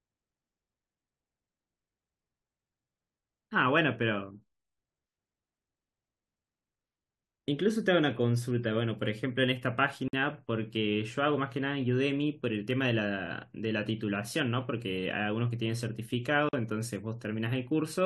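Gaps at joins of encoded pieces occur at 10.08 s and 16.49 s, silences of about 51 and 44 ms. Each piece was encoded separately, and its start-up delay and padded final frame stayed in, so the speech cuts to silence, with smeared edges, then resumes where it stopped.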